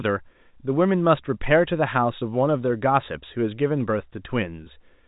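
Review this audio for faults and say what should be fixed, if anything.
Nothing needs fixing: the speech sits in a telephone band that tops out near 3.8 kHz, which fits G.711 A-law coding working as designed, and no faults are present.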